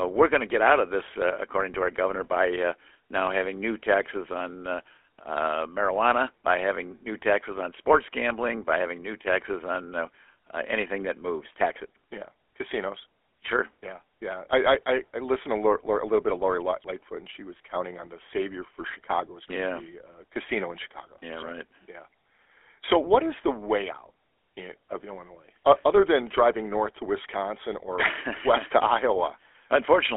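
GSM full-rate codec damage runs through the whole speech clip, from start to finish. The codec rebuilds the voice from a model of the vocal tract fed by a coarse, regularly spaced pulse excitation, discarding most of the fine detail, and the result here is a plainly audible buzzy, gravelly roughness. The band is squeezed to roughly 300 Hz to 3.4 kHz, so it sounds thin and boxed-in, and the rate of damage fits a 13 kbit/s GSM link.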